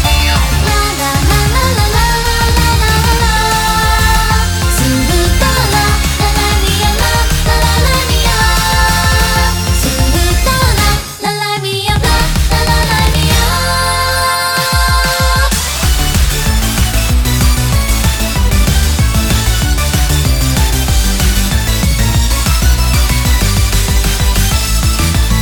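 No technical faults can be heard anywhere in the signal: there are no dropouts, clicks, level jumps or other transport or processing disturbances.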